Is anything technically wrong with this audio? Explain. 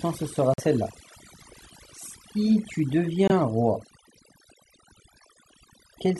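Yes, two things. The whole clip has overdone noise removal. The reduction was set so aggressively that any frequency band sitting near its noise estimate gets pulled way down, taking quieter parts of the voice too. The result is near-silent gaps with twinkly specks.

There are also two corrupt frame muted dropouts: a longer one from 0.54 to 0.60 s and a short one from 3.28 to 3.32 s. The decoder rejected damaged compressed frames and the player filled them with silence. So the sound cuts abruptly to nothing, and the first gap's length suggests several frames went, while timing stays intact.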